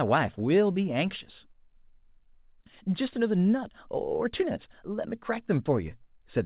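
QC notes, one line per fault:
Nothing stood out on listening to this speech clip.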